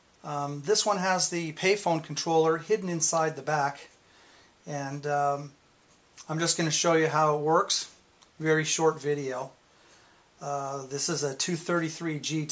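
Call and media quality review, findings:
No audible faults found in the recording.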